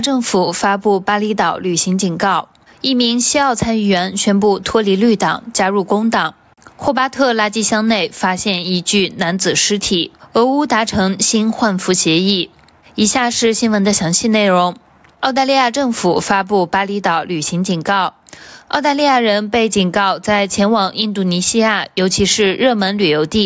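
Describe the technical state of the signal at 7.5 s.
At 7.5 s the signal shows gain pumping, present across the whole clip: the gain swings by around 10 dB, leaving levels squashed. The likely cause is gain set far too high into a fast limiter. The call microphone processing passes nothing above 8 kHz.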